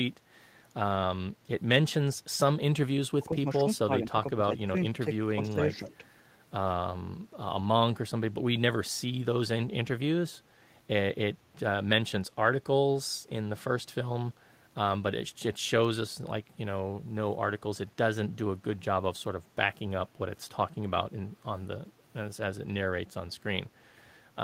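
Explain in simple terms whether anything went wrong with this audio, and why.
Yes. Between 3.2 and 5.6 seconds the speech dips or briefly drops out in short pieces: at 3.2–3.45, 3.85–4.2, 4.36–4.43, 5.05–5.11 and 5.37–5.58 s. This is speech suppressed in double talk, likely because both sides spoke at once and the echo canceller turned the talker down along with the echo.

Right after, from 5.74 to 5.95 s, a faint repeat of the voice follows about 0.19 s behind. This is echo leak, likely from a loudspeaker whose sound reached the microphone and was not fully removed before being sent back.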